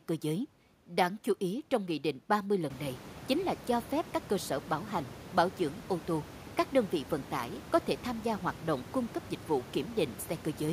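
No technical faults are present.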